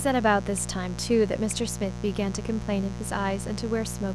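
A mains buzz runs under the speech from start to finish. It is a steady, raspy buzz, fairly loud against the speech. Sharp switching spikes leak in twice per 60 Hz cycle. Their harmonics climb into the kilohertz range, giving the buzz its edge.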